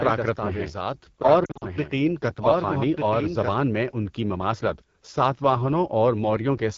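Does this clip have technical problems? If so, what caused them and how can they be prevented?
Yes. The AMR wideband (HD Voice) codec runs through the whole clip at a low rate, about 8.85 kbit/s, where its pulse-driven vocal tract model turns speech rough and raspy. This differs from plain band-limiting: the top end is there but sounds noisy and synthetic. Choosing 12.65 kbit/s or higher prevents it.

A doubled audio track is present from the start until 3.58 s. A full-band copy a few dB quieter trails by about a second, then stops abruptly. Unlike a room echo, it has no decay or reverberant colour. The likely cause is a second, slower capture path or an edit holding two copies. Muting duplicate monitoring or capture routes prevents it.

Lost AMR speech frames occur from 1.45 to 1.65 s. About 120 ms drops out, scattered over 160 ms in runs no longer than 40 ms, which fits several 20 ms frames. 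The decoder repeats the last settings with falling gain, so the sound warbles and dips rather than clicking as a digital dropout would. Stronger radio coverage or error protection prevents it.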